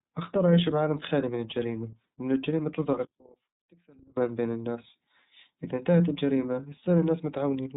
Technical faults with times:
0.00-7.76 iLBC codec
3.05-4.17 one channel inverted

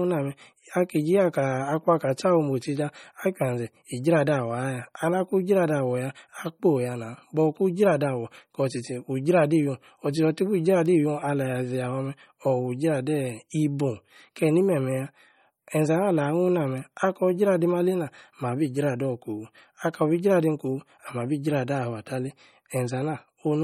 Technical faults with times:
0.00-23.63 MP3 compression

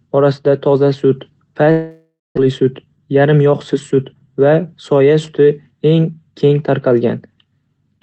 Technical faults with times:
1.71-2.39 long network dropout
2.47-4.27 jitter buffer speed-up

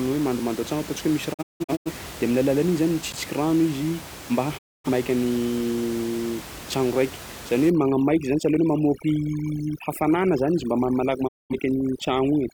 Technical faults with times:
1.32-1.92 digital broadcast dropout
3.12 block of digital silence
4.57-4.89 digital broadcast dropout
7.70-12.54 overdone noise removal
11.27-11.55 digital broadcast dropout

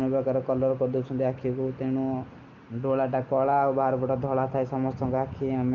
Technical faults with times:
none

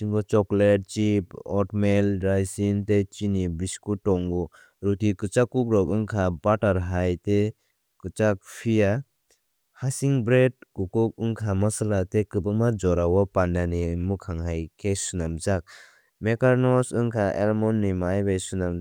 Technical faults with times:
none

